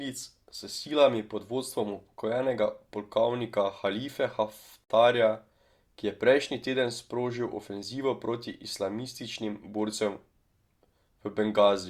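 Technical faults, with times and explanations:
4.84 to 4.90 s, gap at a join of encoded pieces: the speech just drops out for about 58 ms and then picks up right where it left off. That's what you get when two separately encoded chunks are butted together untrimmed, so the encoder's start-up silence and the padded tail of the last frame both end up in the middle. The codec smears the edges of the hole, so the truly silent part is shorter than that.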